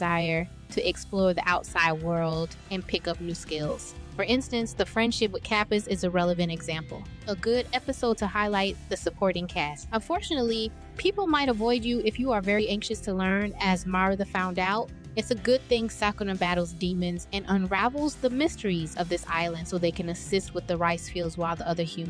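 No technical faults can be heard anywhere in the audio; the signal holds steady and continuous throughout.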